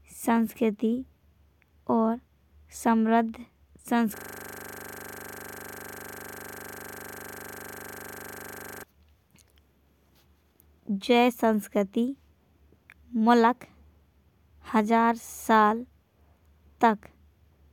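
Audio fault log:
4.17–8.83 s, system hang loop: The audio freezes on one 40 ms slice of speech and repeats it over a hundred times. The system stalled while the hardware kept replaying its buffer. The exact repeats fuse into a rough, steady buzz at 25 Hz.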